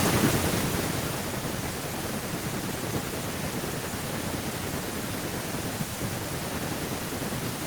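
Right from 0.05 s to 1.52 s there's automatic gain falling: the AGC decided the input was too loud or its background too strong and eased the level down about 8 dB, background sinking right along with it.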